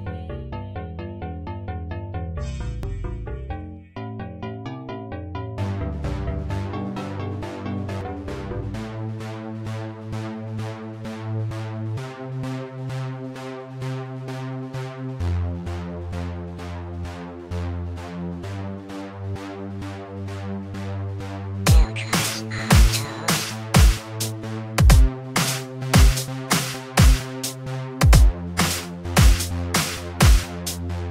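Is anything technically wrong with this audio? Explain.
Yes. At 2.83 s and again at 8.01 s the audio lurches forward with no gap, skipping roughly 20 ms the first time and around 70 ms the second. This is likely a dropped buffer (overrun): samples were overwritten before being collected, so the surrounding audio is spliced directly together.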